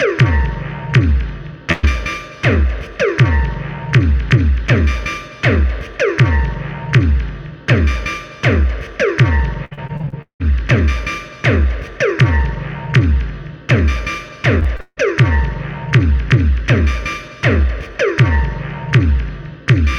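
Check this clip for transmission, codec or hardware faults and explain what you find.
Three packet-loss faults are audible, all transmission-side.

From 1.71 to 1.85 s, a burst of packet loss: the receiver extends the last sound for about 115 ms as a fading buzz or hiss, then resumes with about 120 ms missing.

Repeated packet loss (robotic sound) appears from 9.65 to 10.42 s and 14.60 to 14.99 s. Rapid successive gaps, the longest 178 and 159 ms, are patched by extrapolation, covering about half of each span and leaving a choppy texture with pieces missing.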